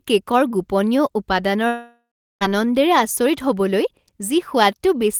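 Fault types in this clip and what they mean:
long network dropout: From 1.67 to 2.43 s the speech gives way to a fading buzz that dies into 0.38 s of silence. It resumes with 0.74 s missing, likely from a stalled stream. Unlike a brief packet-loss click, the gap is long and the lost sound never returns.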